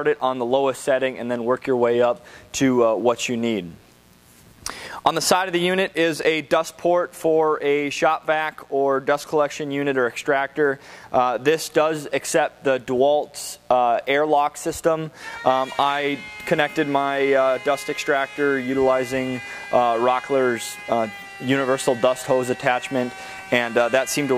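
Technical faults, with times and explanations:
Throughout: mains buzz, a steady raspy buzz about 35 dB below the sound. Switching spikes recur twice per 60 Hz cycle, unlike a smooth hum, so harmonics reach kilohertz.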